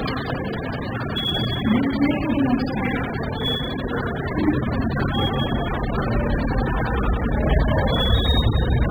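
From start to finish the audio is dull and smeared, with nothing above 5 kHz and a warbling, fizzy texture on sustained material. The lost top end, spectral holes and patchy substitute noise are the signature of heavy AAC compression, likely AAC-LC run at a very low bitrate, around 8 kbps. At that rate the encoder spends its few bits on the strongest bands. It drops the upper spectrum and approximates the rest coarsely, frame by frame.

Sample clock jitter also runs through the whole clip. It shows as a faint hiss and roughness riding on the sound. The converter's timing wanders by a couple of microseconds, so each sample lands slightly early or late. Steep, loud parts of the waveform turn that timing error into a large amplitude error. The error sits roughly 40 dB below the signal, rising with loud and bright passages and disappearing in quiet gaps.

From 7.52 to 7.58 s there is hard clipping. 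A peak overdrives a stage by about 2 dB, and its tops are sliced flat. The squared-off edges add high harmonics, heard as a brief crackle on that peak. The overload is mild and short, so the damage stays confined to this 60 ms burst, not a sustained fuzz.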